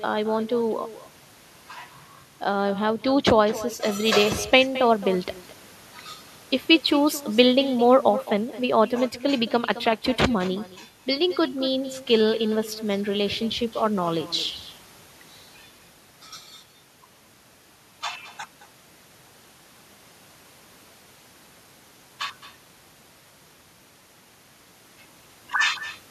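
Throughout the speech, an echo with no canceller shadows every phrase: the far end's loudspeaker feeds its microphone and nothing removes the pickup, so a copy returns about a fifth of a second later, about 15 dB down, thinner than the original.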